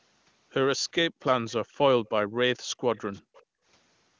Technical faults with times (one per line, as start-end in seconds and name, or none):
2.56-2.80 background gated by the echo canceller
2.96-3.43 echo leak
3.22-3.65 background gated by the echo canceller